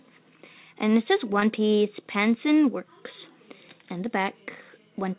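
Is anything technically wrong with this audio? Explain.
Yes. At 1.40 to 1.44 s there is a short concealed packet loss: about 20 ms of audio arrived too late, and the receiver extrapolated the preceding sound before blending back, leaving a brief smear or wobble.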